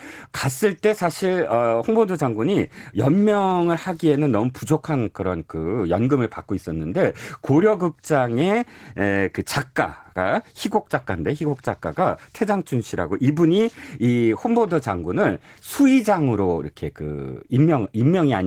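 From start to finish the speech sounds hoarse and faintly robotic, with coding damage that stays plainly audible throughout. This is Opus voice compression at a low bitrate, roughly what a 16 kbps stream in hybrid mode would give. The linear-prediction layer handles the range below 8 kHz with a coarsely coded excitation, and a thin transform layer supplies the top of the band. The result is full-bandwidth audio with audible texture damage, consistent with 20 ms coding frames.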